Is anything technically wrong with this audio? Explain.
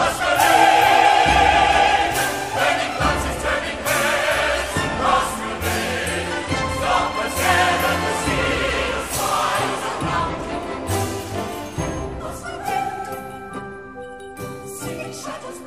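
No, nothing is technically wrong with this audio.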